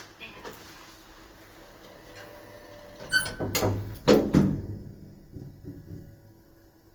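An everyday-sound recording carries plainly audible Opus compression from start to finish: tones come out grainy and rough rather than swirly, likely from music-mode coding at a low rate around 24 kbps. A spectrogram shows full bandwidth with few holes, but upper bands look smeared and noise-filled.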